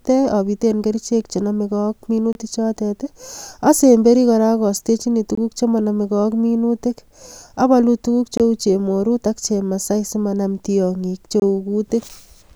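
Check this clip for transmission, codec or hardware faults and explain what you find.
There is one kind of fault in the speech, a gap between chunks. Four short, hard-edged holes of about 23 ms break the sound at 2.33–2.35 s after "obiten kerichek chenomeke ak", 5.35–5.37 s before "chemonomeke ak minutik", 8.37–8.40 s between "abolu tukuk" and "chemorut ak chemasai simanam", and 11.40–11.42 s. They recur every 3 s, so the audio was carried in 3 s pieces with silence inserted at each join, with no sound lost.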